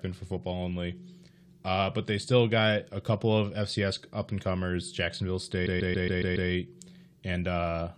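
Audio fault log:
5.65–6.49 s: repeated frames. A short block of about 139 ms of the speech plays again six times in a row, giving a stutter. This adds about 0.84 s to the audio.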